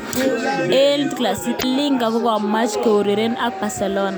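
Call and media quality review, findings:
Short chirp, squawk, click or hole in speech at 1.56–1.64 s, about 80 ms. Damaged data in a compressed stream: corrupted bytes in the encoded frames, so the decoder misreads them, loses frame sync and resumes at the next valid header. Probable component: transport or storage feeding the decoder.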